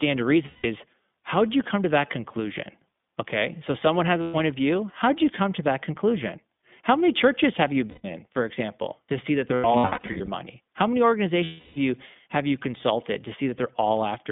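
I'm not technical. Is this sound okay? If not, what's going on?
No. The whole recording passed through the iLBC codec, a phone-call format. It strips the higher tones, so the speech sounds thin and slightly robotic.

Bits of the signal also went missing. These are lost iLBC frames. Each gap is briefly filled with a buzzy, held vowel, at 0.46, 4.22, 7.90, 9.48 to 10.29, and 11.44 seconds.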